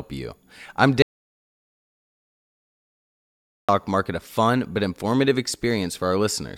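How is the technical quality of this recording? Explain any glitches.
The recording has one clear glitch, an audio dropout to silence from 1.02 s to 3.69 s. About 2.66 s of speech vanishes mid-flow and returns abruptly. The likely cause is a lost input, with the recorder writing silence. Unlike a natural pause, the gap has no room tone at all, just dead digital silence.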